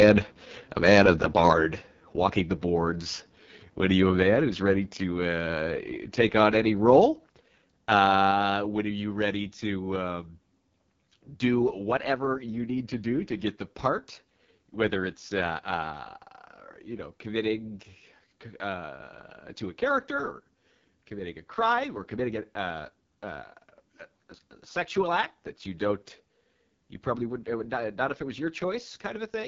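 Throughout the clip, speech passes through the AMR wideband (HD Voice) codec, and the heavy damage points to its lowest bitrate, around 6.6 kbit/s. At that rate the pulse-driven model of the vocal tract cannot follow the speech closely, so the sound turns rough and raspy. Nothing is present above 7.5 kHz, and the top band carries only shaped noise in place of real detail.

From 0.00 to 0.09 s, a microphone overload is likely: the peaks run about 3 dB past the converter's limit, and a few percent of samples have their tops sheared flat. That opening burst gets a harsh, crackling edge.

The same fault recurs from 1.36 to 1.53 s, this time about 2 dB over. Under one percent of samples are cut, which still leaves a brief gritty rasp on the loudest syllable.

Right after that distorted peak, at 1.53 s, the microphone volume is stepped down, likely by the call software reacting to the overload. 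It cuts the input gain in one move by about 5 dB, so the speech and the background together drop audibly in level.

At 7.29 s the microphone volume is stepped down again, likely by the same automatic control, this time by about 4 dB. Everything that follows sits noticeably quieter, with no gradual fade to soften the change.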